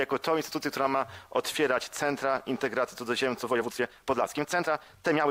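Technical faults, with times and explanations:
3.40–5.3 s, time-stretched section: the pace jumps to 1.6 times faster while the pitch holds, giving a rushed sound, likely from software dropping short slices to shorten it. On a spectrogram the bands keep their height but events crowd together.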